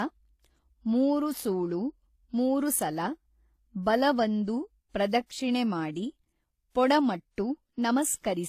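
Speech runs throughout with transcoding between lossy codecs: artefacts from one codec sit beneath another layer of coding artefacts, likely HE-AAC near 20 kbit/s re-encoded as WMA. On a spectrogram, nothing appears above 14.9 kHz across the whole clip.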